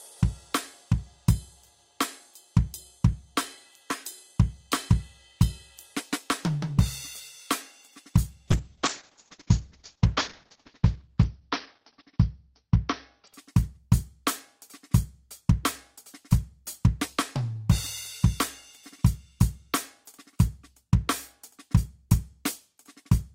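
From 8.53 s to 13.39 s the music goes through a call bitrate drop. The encoder was starved of bits, so the top end collapses from the full 20 kHz band to a cutoff near 6 kHz, and for about 3.0 s the sound turns muffled and watery, with coarse, smeared textures. The audio never drops out, and what remains sounds grainy rather than just dull, which rules out packet loss or a simple low-pass filter. That points to a rate near 7 kbps, recovering towards 32 kbps.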